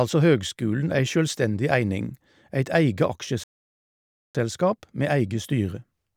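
At 3.44 s the speech cuts off mid-flow and the output stays silent until 4.35 s, a gap of about 0.91 s, before picking up again. This is a playback stall, most likely the player running out of buffered data or its output thread being blocked. On the waveform the signal drops to silence across that span; on a spectrogram it appears as a clean vertical band of empty space with sharp edges.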